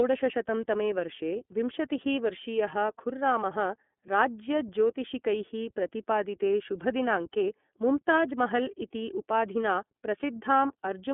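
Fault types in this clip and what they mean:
iLBC codec: The speech runs through the iLBC narrowband codec throughout. Nothing above 3.8 kHz remains, and the band sits near 200 Hz to 3.5 kHz. Each 30 ms frame is coded independently. This leaves a plainly audible rough, synthetic edge, which fits its 13.33 kbps mode.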